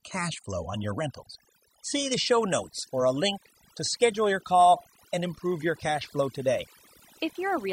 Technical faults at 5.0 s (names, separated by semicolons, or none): overdone noise removal